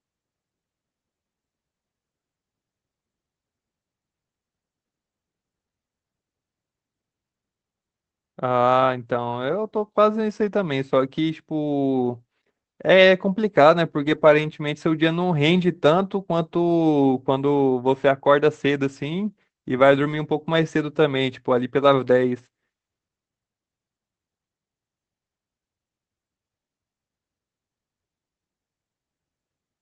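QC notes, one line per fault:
14.05–14.27 s, lost packet rebuilt from error correction: about 120 ms decoded from lower-bitrate backup copies, so there is no gap but the sound turns rough and noisy. The spectrogram shows grainier energy below the 8 kHz Opus ceiling, with an unbroken waveform.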